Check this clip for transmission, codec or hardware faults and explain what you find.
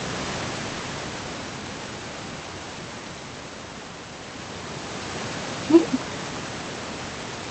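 The signal is technically sound, with the room's own background noise sitting about 20 dB below the speech and the call path's band limit at 8 kHz, consistent with Opus at around 20 kbps, behaving as that link normally does.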